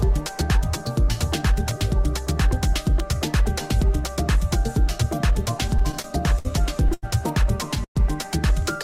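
From 5.61 to 6.47 s the audio drags and catches eight times: short sounds are held and repeated, the longest hold about 60 ms, adding up to 134 ms, roughly a sixth of that stretch. These are repeated stalls (stutter). Packets kept reaching the receiver late, so its jitter buffer emptied again and again, and each time it extended the last sound until more data came. Nothing is lost; the timing is broken up.

At 6.94 s one sound is stretched for 89 ms, a brief hold with a faint buzz or dip before the audio continues at the same point. This is a short stall from a late packet. A single packet arrived about 89 ms after it was due, the buffer ran dry, and the receiver filled the wait by prolonging what it had just played. It then resumed without skipping anything.

From 7.84 to 7.98 s the audio stops: a short fading buzz or hiss gives way to about 90 ms of silence, 114 ms in all, before the sound picks up where it left off. 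This is a call audio freeze, likely caused by packets held up in transit for about 114 ms. The receiver faded its continuation of the last sound to silence while the buffer sat empty, so a gap was inserted rather than anything removed.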